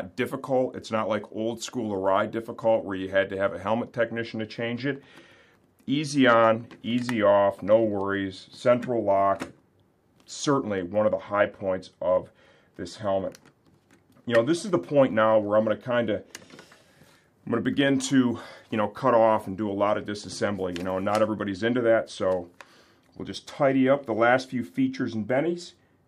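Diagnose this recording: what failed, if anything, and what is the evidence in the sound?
At the converter stage, two devices likely run on unsynchronised clocks about 200 ppm apart, dropping or repeating one sample whenever the drift totals a full sample. These clock slip clicks sound as faint, regular ticks roughly every tenth of a second from 0.13 s to 26.00 s.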